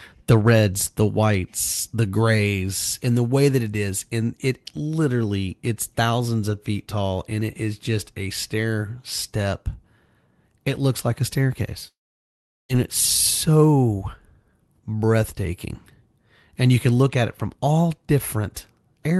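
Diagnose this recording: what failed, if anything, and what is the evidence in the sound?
At 11.87 to 12.71 s a fading buzz or hiss gives way to silence, then "it's so" resumes with content skipped rather than delayed: likely a long network dropout.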